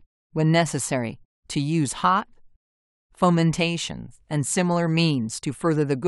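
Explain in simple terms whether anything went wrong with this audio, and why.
Nothing went wrong here that I can hear: the recording runs along without any glitches, dropouts or other technical problems.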